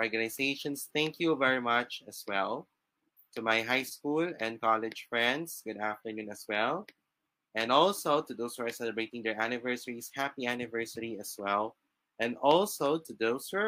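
No technical faults can be heard anywhere in the recording. Nothing breaks, drops out or distorts at any point.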